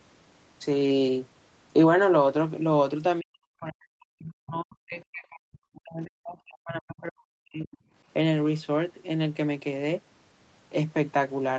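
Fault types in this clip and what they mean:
Speech suppressed in double talk: the speech is turned down, up to about 40 dB, likely echo-canceller muting.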